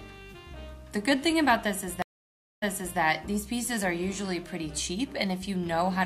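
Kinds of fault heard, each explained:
Stream reconnect: the link dropped and the player restarted its decoder mid-stream. This leaves about 0.6 s of silence from 2.02 s, after which sound resumes 0.37 s earlier, repeating material. The waveform shows a flat gap and the spectrogram an empty vertical band.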